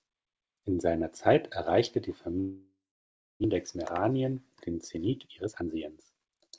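This is a speech clip carried over a call link whose band stops at 8 kHz, which fits G.722. Just after "erreichte die", at 2.40 s, the sound smears into a fading buzz. Silence follows until 3.46 s. About 0.6 s of speech is lost for good. This is likely a long network dropout, with the receiver filling the gap. From 3.53 s to 6.48 s the speech runs about 10% fast at unchanged pitch and sounds hurried. This is a jitter buffer speed-up. Audio piled up after the gap, adding roughly 0.4 s of delay. The receiver trimmed short pitch-period pieces, around 0.3 s in total, to catch up.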